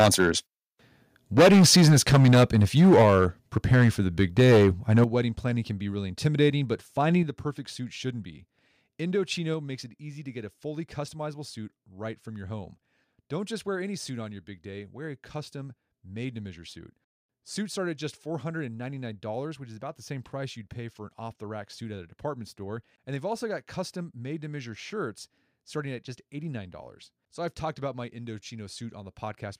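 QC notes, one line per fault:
0.0–0.31 s, 1.37–3.26 s, 3.56–3.9 s, 4.19–5.04 s and 6.25–6.47 s: microphone overload. The input gain was likely set too high, so peaks drive the converter past full scale by up to about 12 dB. Their tops are flattened, giving a harsh, crackly edge. The run from 1.37 s is the most heavily clipped, and the one ending just before "wedding planning can be" is also strongly distorted. By 6.25 s the overshoot is only about 1 dB.
3.02 s, 5.04 s, 7.23 s and 9.54 s: microphone volume stepped down. Software reacting to the clipping likely cut the device's input level in single steps of about 2, 9, 6 and 3 dB. Voice and background drop together and abruptly each time. The largest drop, at 5.04 s, comes straight after the distorted peak and right before "wedding planning can be".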